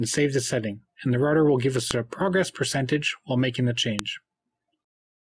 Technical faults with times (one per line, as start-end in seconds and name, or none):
1.91 file header played as audio
3.99 file header played as audio